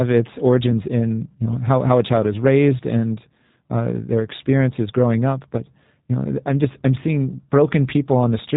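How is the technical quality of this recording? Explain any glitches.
The recording is limited by G.729 codec damage, which is plainly audible across the whole clip rather than as isolated glitches.

G.729 codec: From start to finish the speech is rebuilt by a low-rate parametric coder, which fits 8 kbit/s G.729A. It models each 10 ms frame as a vocal tract filter driven by a pitch predictor and a few pulses, so the speech sounds rough and faintly synthetic. On a spectrogram, energy stops sharply at 4 kHz, and harmonics look smeared.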